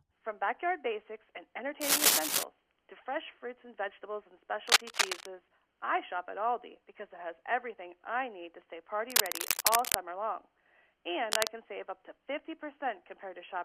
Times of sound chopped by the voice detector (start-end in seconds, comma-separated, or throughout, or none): none